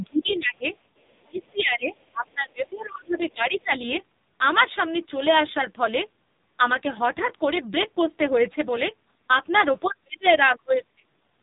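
Throughout, the speech carries AMR narrowband mobile codec damage: nothing above 3.8 kHz, and a buzzy, synthetic quality that fits a low bitrate near 6 kbps, heavier than plain band-limiting.

From 0.28 to 0.36 s, a faint second voice about 25 dB below the talker is likely the other side's voice leaking through, an echo-canceller residue rather than background chatter.

Between 1.24 and 3.74 s, the talker dips by around 25 dB in pieces over roughly 2 s, likely speech suppressed in double talk. The level drops while the other side speaks, unlike a dropout's abrupt silence.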